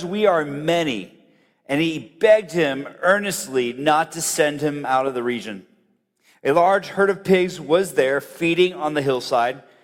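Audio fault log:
No fault is heard in the audio.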